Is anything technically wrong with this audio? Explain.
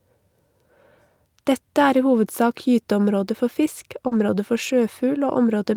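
Yes, there are two closely overlapping transmission faults near the end of this speech clip.

From 4.07 to 4.13 s there is short concealed packet loss. About 40 ms of audio never reached the decoder in time, so the receiver extended the preceding sound and then crossfaded back into the real signal. It is heard as a brief smear or wobble. On a spectrogram the sound runs unnaturally steady, then rejoins the real speech.

From 4.11 to 4.21 s there is a lost packet rebuilt from error correction. Roughly 60 ms was played from the low-bitrate backup copies carried in following packets, which fits three separate lost packets. There is no gap, but that stretch sounds rougher and grainier. On a spectrogram the harmonic detail looks blurred, with extra noise between harmonics. In the waveform the amplitude continues, with slightly ragged fine structure.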